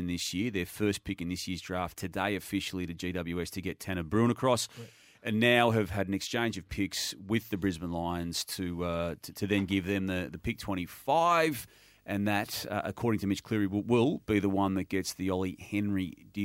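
From 10.35 s, just after "give them the the", a video or display buzz comes in and runs to the end. A screen or video cable is coupling into the audio path, adding a 50 Hz field-rate buzz with hash above it and a faint whine at 15.6 kHz from the line scan, roughly 40 dB under the speech. A spectrogram shows 50 Hz harmonics stacked up the low end and a thin steady line at 15.6 kHz.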